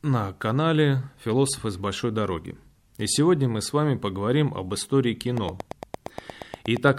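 Something in the signal chain, likely interference from nearby equipment or a faulty connection or power supply, injects a steady series of pulses into this speech recording from 5.37 s to 6.89 s. The result is a train of clicks: about fifteen near-identical ticks arriving at an even 8.6 per second, peaking around 10 dB above the speech. They sit on top of the sound as a regular popping rhythm and remain audible in any gaps between syllables until 6.89 s.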